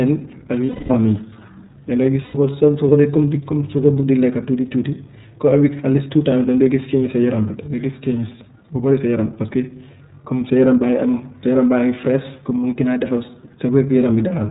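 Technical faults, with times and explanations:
Throughout: iLBC codec. The speech is cut off sharply above 4 kHz and has a slightly rough, synthetic edge. The damage is plainly audible and fits the 13.33 kbps mode with 30 ms frames. Unlike a simple band-limit, the harshness comes from coarsely coding each frame's excitation.
0.66–0.90 s and 2.25–2.35 s: lost iLBC frames. The first gap lasts 240 ms and the second, just after "dangay gis", lasts 90 ms. These lengths point to eight and three missing 30 ms frames. In each gap the decoder repeats the last pitch cycle mixed with noise, so the sound becomes a held, buzzy or breathy vowel that fades across the longer gap instead of dropping to silence. Because each iLBC frame stands alone, clean speech resumes almost immediately afterward, with no lingering smear.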